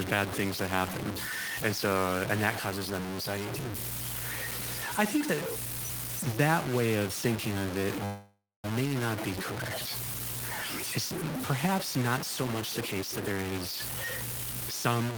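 From start to finish the speech sounds coarse and gritty, with a grainy distortion that shifts with every syllable and gets harsher as the voice gets quieter. That's low bit depth without dither, most likely a 4-bit version made by truncating the samples instead of rounding them with dither. With so few levels available, the rounding error is nearly as loud as the speech. It also tracks the signal rather than sitting underneath it as a steady hiss, so the quietest stretches crumble or sputter.

At 8.05 s, right after "of thinking of it", there's a call audio freeze lasting until 8.66 s. The last bit of sound gets smeared out into a fading buzz or hiss, and then about 230 ms of it is just silence. This is likely a jitter buffer running dry while packets were held up in transit. When they arrive, the talk picks up cleanly at "not be correct" with nothing lost, but about 584 ms of delay has been added.

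From 12.81 s to 14.69 s, starting just after "not so much the", there's a jitter buffer speed-up. The pitch stays put, but the speech runs at about 130% speed and sounds rushed. The receiver had more audio queued than it wanted, so it kept cutting out short pitch-period slices, about half a second in total, to catch up.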